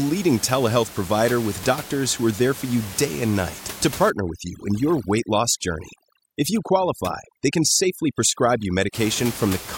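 A speech recording whose room noise sits about 15 dB below the voice, with overdone noise removal from 4.1 to 8.9 s, just after "day and night to". Bands near the noise estimate are cut hard, leaving near-silence with twinkling specks. A spectrogram shows blackened gaps pocked with isolated bright dots and frayed, patchy harmonics.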